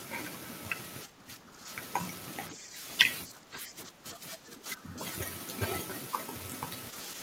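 The speech dips from 1.05 to 1.7 s and 2.51 to 2.85 s, falling by about 10 dB, then from 3.26 to 4.98 s by about 15 dB. This is likely speech suppressed in double talk, with an echo canceller turning down overlapping speech as echo.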